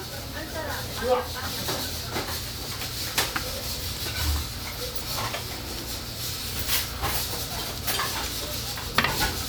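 Sound recording with no technical fault audible anywhere in the clip.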